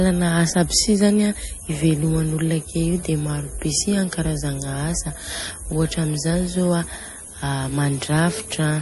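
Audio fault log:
Throughout: MP3 compression. The speech has a plainly audible watery, swirly texture, and nothing is heard above 11.5 kHz. The likely cause is MP3 coding short of bits, which fits about 48 kbps. The encoder cut the treble and let weak frequency lines flicker between frames.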